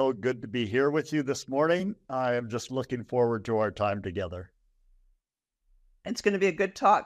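A single sharp click sounds at 2.53 s, thin and instantaneous against the speech. It is likely dropped samples: a couple of samples missing from the stream, a tiny fraction of a millisecond, so the waveform jumps abruptly to a later value.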